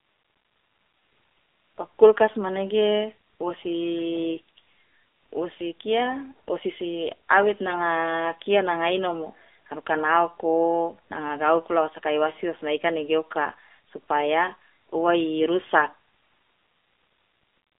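From start to finish the speech has the AMR narrowband mobile codec sound: nothing above 3.7 kHz, a thin 300 Hz to 3.6 kHz line band, and a clearly buzzy, synthetic edge that fits roughly 7.4 kbps.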